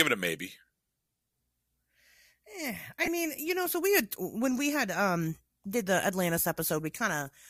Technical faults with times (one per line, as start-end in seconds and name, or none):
3.03-3.09 corrupt frame decoded